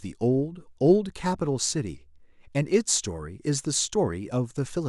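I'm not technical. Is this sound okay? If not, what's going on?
No. Clock slip clicks run from 0.11 s to 4.88 s, a soft rattle of ticks about twenty times a second, likely from two devices' clocks drifting apart.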